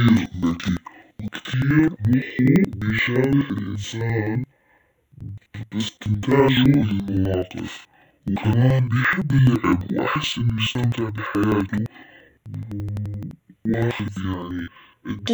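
Interleaved audio read as planar throughout this speech clip: blocks of about 85 ms, consistent with 4096 samples, are split into half-speed halves, so it sounds an octave low, doubled and choppy at 11.7 Hz.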